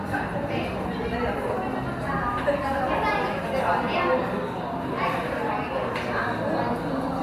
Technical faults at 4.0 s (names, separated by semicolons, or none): none